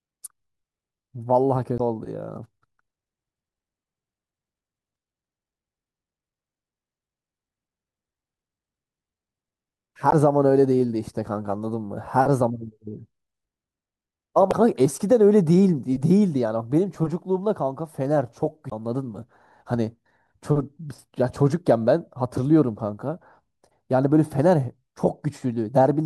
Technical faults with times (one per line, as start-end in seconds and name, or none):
1.77-1.81 damaged data in a compressed stream
10.09-10.14 damaged data in a compressed stream
14.49-14.53 damaged data in a compressed stream
18.69-18.72 damaged data in a compressed stream